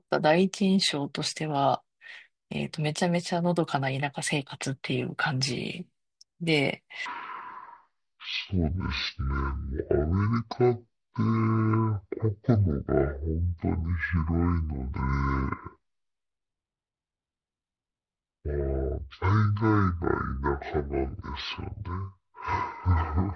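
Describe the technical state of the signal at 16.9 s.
Wrong sample rate, from 7.06 s to the end: the samples play at half their intended rate, which fits 44.1 kHz material played near 22 kHz. The sound runs at 0.5x speed and a full octave low.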